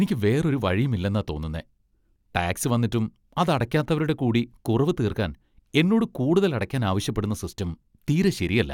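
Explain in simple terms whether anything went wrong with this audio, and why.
Nothing went wrong; I hear no faults in this recording.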